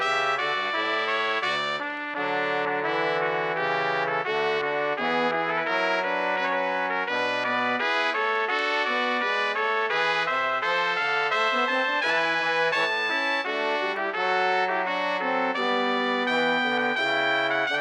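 No technical faults can be heard anywhere in the audio.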